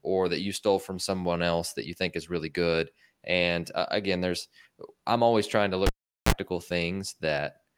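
A speech recording with a cable pulled and plugged in back again, from 5.86 s to 6.32 s. A pop marks the disconnection, then the signal drops to near silence for about 410 ms. A short burst of 60 Hz mains buzz, roughly 35 ms, follows as only the plug tip makes contact, and another pop sounds as the full connection restores the audio at 6.32 s.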